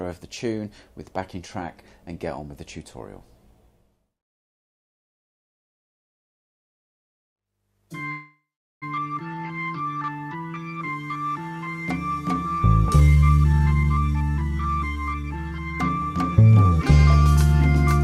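A call audio freeze runs from 8.11 to 8.84 s: the sound stops and is filled for about 0.7 s, with a continuation of the last sound fading into roughly 0.42 s of near silence. It then resumes where it left off with nothing lost, likely because delayed packets drained the jitter buffer. A jitter buffer speed-up follows from 13.00 to 15.52 s, where the audio plays at about 116% speed without a pitch change. Short pitch-period slices are repeatedly cut, removing roughly 0.4 s to pull the built-up delay back down, which makes the passage sound hurried.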